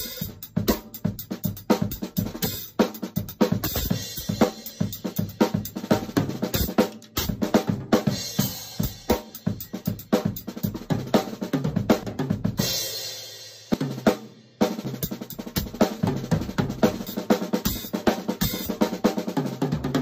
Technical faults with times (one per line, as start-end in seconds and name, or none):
2.30 dropped buffer (overrun)
12.03 dropped buffer (overrun)
13.74 dropped buffer (overrun)
14.85 dropped buffer (overrun)
17.07 dropped buffer (overrun)